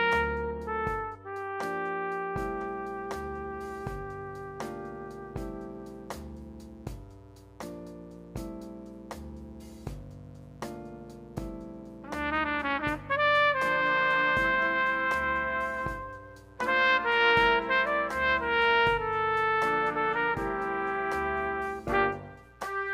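From 2.43 s to the end, a raspy mains buzz sits well below the sound. It comes from switching spikes on 60 Hz power, with harmonics reaching several kHz.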